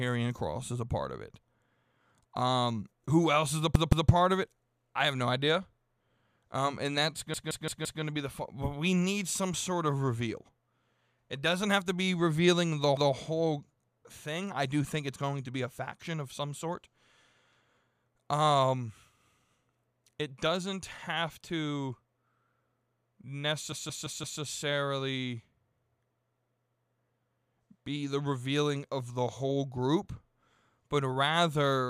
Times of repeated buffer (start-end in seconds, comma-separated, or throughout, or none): 3.75-4.10, 7.34-8.02, 12.97-13.14, 23.72-24.41